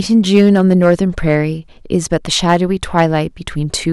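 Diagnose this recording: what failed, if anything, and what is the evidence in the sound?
Hard clipping on the speech peaks, from 0.34 to 1.36 s, 1.95 to 2.56 s, and briefly at 2.98 to 3.06 s. The failure sits at a gain stage feeding a converter or fixed-range sample format. The signal was driven about 4 dB past full scale in the first two stretches and about 2 dB in the last, so peaks were sliced flat. The flattened tops add high harmonics, heard as crackle riding on the louder syllables.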